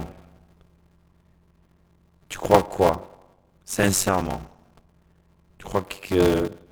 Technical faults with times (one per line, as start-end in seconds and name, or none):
0.00-6.71 block size mismatch (padded)